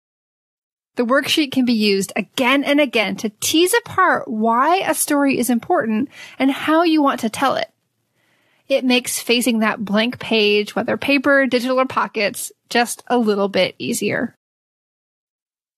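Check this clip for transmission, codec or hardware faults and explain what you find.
Compressed frames skipped is the one fault here, occurring twice. It falls at 3.02 s and again at 9.43 s. Each time a short stretch of speech never plays, so the audio jumps ahead. The missing blocks were either absent from the file or rejected by the decoder as damaged. Each gap is about 50 ms, which fits roughly two frames of about 23 ms. The join is heard as a brief glitch where the speech skips forward.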